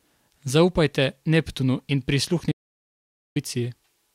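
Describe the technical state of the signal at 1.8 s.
At 1.8 s the speech signal is intact, with no audible dropout, distortion, noise burst or other fault at that moment.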